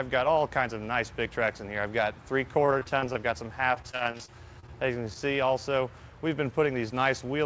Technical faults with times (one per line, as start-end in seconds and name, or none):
2.66-3.17 repeated packet loss (robotic sound)
3.75-5.17 repeated packet loss (robotic sound)